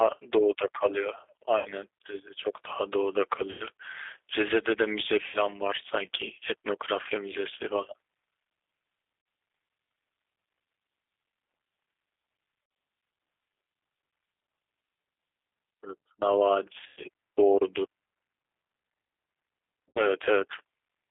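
Speech over a phone line, with plainly audible G.729 codec damage throughout. Sound is confined to roughly 300 Hz to 3.6 kHz and has a rough, synthetic edge, which points to G.729A at 8 kbit/s. VoIP packet loss concealed by the speech codec breaks in at 1.58–1.72, 3.51–3.65, 5.28–5.42, 7.03–7.07, 9.20–9.26, 12.63–12.71, 16.88–17.04 and 19.89–20.04 s. In each gap the decoder stretches its last frame into a fading buzzy tone or coloured noise, and the sound stays weakened briefly afterwards.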